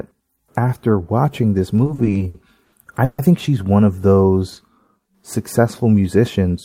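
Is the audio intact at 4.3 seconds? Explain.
Yes, at 4.3 seconds the speech runs on without any audible dropout, click, distortion or other technical fault.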